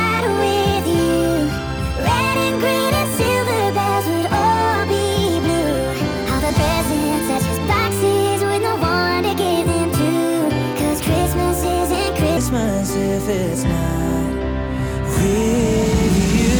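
From 0.0 to 12.37 s the sound is hurried and about five semitones high, a section at the wrong speed, likely played 1.35 times too fast.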